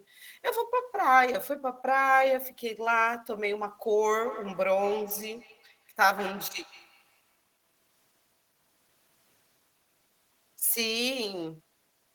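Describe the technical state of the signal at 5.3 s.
At 5.3 s the speech is trailed by a thin, ringing copy of itself that returns roughly every 150 ms and peaks about 16 dB below the direct speech. This is feedback echo between two devices, running from 4.08 to 8.23 s. A second device in the same room plays back what this microphone sent, and the microphone picks it up again. Its echo canceller only removes sound from its own loudspeaker, so the loop persists.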